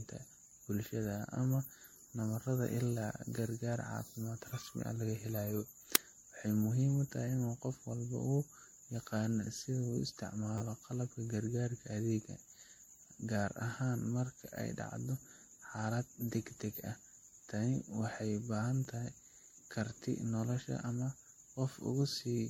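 From start to finish the speech sounds swirly, smeared and hollow, attacks are blurred, and nothing is present above 16.5 kHz. This is likely generation loss: repeated MP3 passes, pointing to around 60 kbit/s, each re-quantising on a shifted frame grid so the artefacts stack up.

At 5.95 s a very short, harsh loud crack cuts in. This is an uninitialised buffer, where stale memory was played as audio before real samples were written. Its length fits a block of about 256 samples.

At 10.58 to 10.61 s a tiny slice of sound stutters several times with hard joins, and at 18.85 s a single quick repeat gives a brief click-like buzz. Both are a repeated buffer: audio arrived late, so the device replayed its last block, consistent with a 10 ms buffer.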